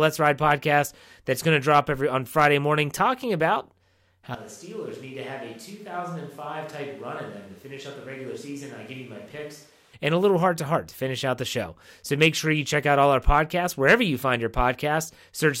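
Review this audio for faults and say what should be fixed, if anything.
From 4.35 s to 9.93 s the speech abruptly turns roomy and hollow, with thinner bass. This is likely a switch to a distant microphone, with the close mic's signal dropped and a farther pickup carrying the sound. The level falls by roughly 10 dB. Room noise rises to about 25 dB below the speech. At 9.93 s the close sound returns just as suddenly. To prevent it, check the close mic's connection and monitor its feed throughout recording.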